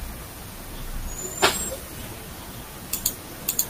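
Listening to the speech recording revealed nothing that stood out as a technical problem at any point.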